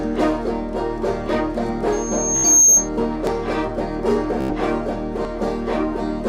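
At 1.29 s the music skips for roughly 20 ms, the two sides butted together without a pause. It recurs at 3.27 s and 5.25 s, about 2 s apart. This is audio missing between chunks, likely from a processor dropping a brief piece at each chunk boundary.

From 1.92 s a loudspeaker feedback squeal appears: a pure tone at 6.4 kHz that swells over roughly 0.7 s to about 10 dB above the music, then holds until 2.89 s. A microphone is hearing its own loudspeaker, and the loop gain at that frequency has passed one.

Within the squeal, from 2.37 to 2.48 s, comes a Bluetooth stutter: a short slice replays in a rapid buzz for 76 ms, which suggests about five lost packets. A second stutter runs from 4.41 to 4.53 s, 91 ms long, which suggests about six. Each time the receiver repeats its last buffer until data returns, and playback resumes further along.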